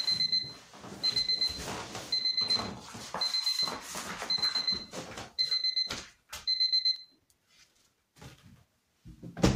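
From 0.81 s to 9.01 s, periodic USB or driver dropouts tick every 1.02 s. Each skips a tiny slice of audio, well under a millisecond, causing a click.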